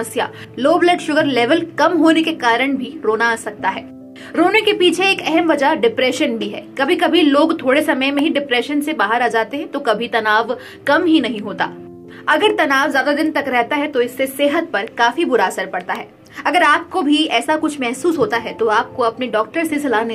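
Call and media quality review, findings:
Electrical switching spike, two isolated snaps at 8.19 s and 15.95 s, the first louder than the second. Each is a brief transient laid over the audio. Likely an arc from a nearby switch, motor or static discharge coupling into the line. It differs from a buffer dropout or codec glitch because the underlying sound runs on unbroken beneath each snap, with no gap, repeat or smearing.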